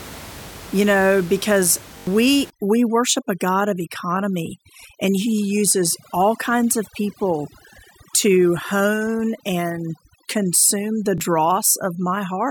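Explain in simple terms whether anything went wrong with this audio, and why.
A couple of things went wrong. At 1.98 to 2.07 s there's a repeated buffer. New audio arrived late, so the player kept replaying the last tiny chunk, about 21 ms long, four extra times. You hear a short stutter, and roughly a tenth of a second of real sound is skipped. The same thing happens once more at 11.18 s, with a single extra repeat.

From 2.5 s to the end, there's overdone noise removal. The room's background noise is real and not a fault, but a cleanup filter was set too strong on it. It wipes out the quiet parts of the sound too. The background drops and breaks up into twinkly specks.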